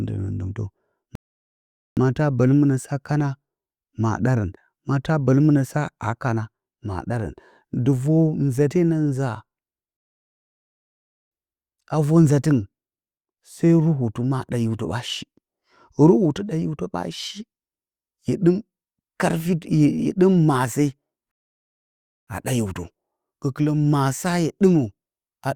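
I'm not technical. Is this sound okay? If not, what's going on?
No. The speech stops dead three times and goes silent before carrying on: at 1.15 s for about 0.8 s, at 9.97 s for about 1.3 s, and at 21.31 s for about 1 s. Each time it resumes exactly where it left off, with nothing skipped. This is a rebuffering stall: the player used up the audio it had downloaded and paused until more arrived, which adds waiting time without losing any of the recording.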